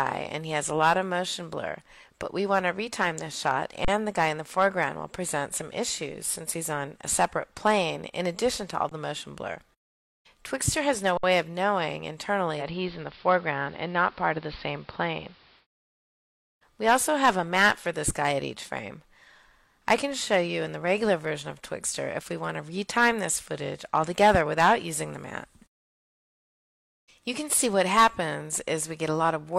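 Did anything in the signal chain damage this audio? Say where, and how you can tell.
Yes. Driver or buffer stage: underrun with held sample at 3.85 s (34 ms), 8.89 s (20 ms) and 11.17 s (60 ms). The output holds flat, then resumes where it stopped.

Reception stage: digital radio blending to analogue from 12.56 to 15.67 s. With the digital signal lost, the receiver cross-faded over 120 ms to AM. Level shifts about 1 dB, with hiss about 30 dB down.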